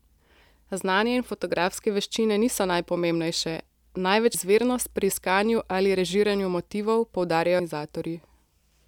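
A brief glitch cuts in at 4.34 s, just before "izvirnost pri iskanju ali", and again at 7.60 s, right after "iskanju ali režiranju motivov". Both come from damaged data in the compressed stream, which makes the decoder lose frame sync.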